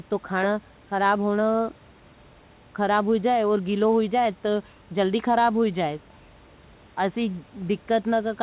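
No technical faults can be heard anywhere in the speech.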